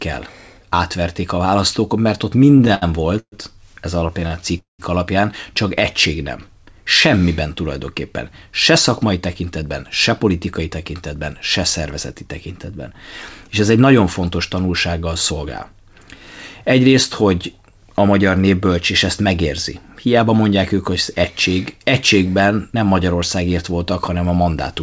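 A speech recording carried over a WebRTC call path, audibly band-limited with nothing above 8 kHz, which fits a 64 kbps G.722 codec, shows three kinds of fault. From 2.42 to 4.44 s, packets arriving late kept draining the jitter buffer, giving repeated stalls (stutter): 13 gaps, the longest 125 ms, bridged by about 0.32 s of continued sound, with nothing lost but the speech dragging. Right after, at 4.58 to 4.81 s, a call audio freeze, likely from a sudden 205 ms rise in network delay, stretches the last sound for about 205 ms, including 140 ms of silence, before speech resumes where it stopped. Later, the receiver trimmed pitch-period slices to shrink an overfull buffer, a jitter buffer speed-up that makes the speech run faster at unchanged pitch. This happens at 8.46 to 13.85 s at 104% speed, shedding roughly a fifth of a second, at 15.31 to 15.73 s at 107%, where it sounds hurried, and at 19.41 to 20.29 s at 104%.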